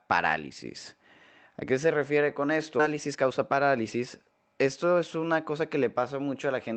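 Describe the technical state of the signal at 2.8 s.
A skip ahead occurs at 2.79 to 2.81 s, right after "qué se refiere con". About 0.4 s of audio is dropped, and playback jumps forward almost seamlessly.

A jitter buffer speed-up follows from 2.89 to 4.07 s. Short pitch-period pieces are cut repeatedly. The speech runs about 10% faster at the same pitch and sounds hurried.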